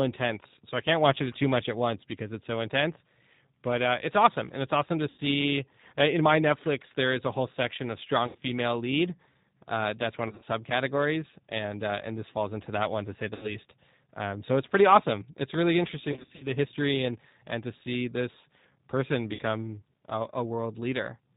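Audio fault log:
throughout: G.729 codec. Slightly rough, synthetic speech with nothing above 4 kHz, which fits an 8 kbit/s G.729A encoding rebuilding speech from a filter and sparse pulses.
5.10–5.20, 8.27–8.37, 10.28–10.43, 13.35–13.56, 16.12–16.47, 19.35–19.41: VoIP packet loss concealed by the speech codec. Speech smears into a fading buzzy tone or coloured noise as the decoder extends its last pitch over lost audio: 80 ms in most gaps, scattered at 10.28 s, 180 ms scattered at 16.12 s, 40 ms at 19.35 s.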